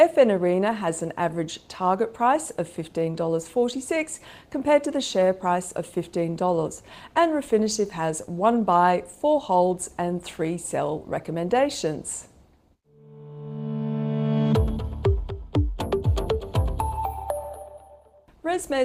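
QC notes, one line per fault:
No faults found in this clip.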